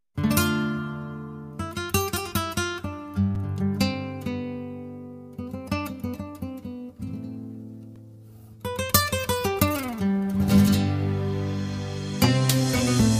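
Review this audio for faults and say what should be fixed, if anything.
Block of digital silence at 3.35 s and 7.96 s: audio drops abruptly to silence for 5.8 ms, consistent with a 256-sample buffer, then 1.45 ms, consistent with 64 samples. Each block is heard as a click. To prevent it, make the audio thread always fill its output buffer on time, and check calculations for invalid values.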